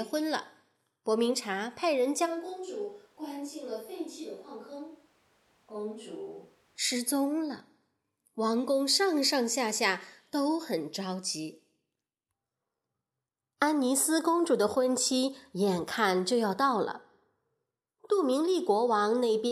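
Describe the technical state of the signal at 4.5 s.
At 4.5 s the recording is in a switch to a distant microphone, running from 2.27 s to 6.77 s. The close microphone's signal has likely dropped out, leaving a far pickup. The voice turns abruptly roomy and hollow, thinner in the bass and about 10 dB quieter, with background noise only around 30 dB below it. On the waveform the envelope steps down at the start and back up at the end. The spectrogram shows weaker low frequencies, smeared reverberant tails and a raised noise floor.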